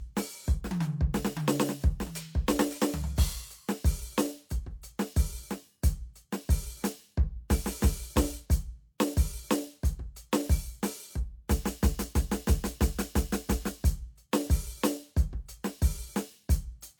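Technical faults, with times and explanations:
Throughout, low-bitrate audio saved at a high bitrate: the music carries compression artefacts and has nothing above 18.5 kHz, despite sitting in a high-rate MP3. This likely comes from an earlier low-bitrate encode, possibly HE-AAC, whose losses re-encoding cannot restore.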